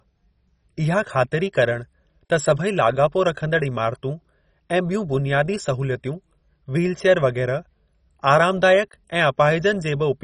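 From start to finish the speech has a dull, gurgling, grainy quality, with nothing at all above about 10.4 kHz and the remaining upper detail flickering in and out. The damage is heavy and points to MP2 compression, likely at a very low rate, something like 32 kbps. With so few bits to share out, the encoder shuts off whole upper sub-bands and quantises the rest coarsely, giving that low-rate digital-radio sound.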